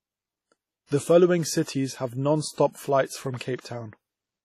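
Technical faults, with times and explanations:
Throughout, WMA compression: heavily ringing, washy speech with breathing hiss and nothing above 16.1 kHz, likely smeared transform-codec quantisation noise pointing to roughly 32 kbps.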